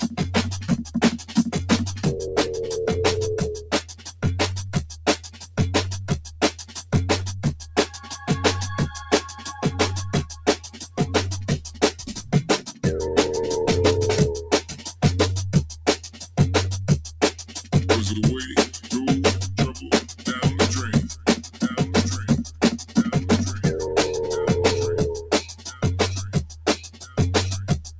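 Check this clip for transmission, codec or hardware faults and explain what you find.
The main fault is processing, not transmission: a speech noise suppressor is working on material it was never meant for. The call path itself passes nothing above 8 kHz, which fits a wideband codec such as G.722 at 64 kbps.

Noise suppressor applied to music or sounds, throughout the clip: a suppressor built for speech treats sustained tones, ambience and reverb as noise and pulls them down. Attacks survive but held material sinks, so level swings of around 15 dB make the audio pump and thin.

Sound cut by the noise suppressor occurs at 0.58–2.03 s, 3.58–12.32 s, 14.43–17.72 s, 19.72–22.95 s and 25.21 s to the end. In each span, steady or decaying sound is misjudged as noise and ducked by up to about 10–11 dB. Tails are cut short, while sharp onsets mostly come through intact.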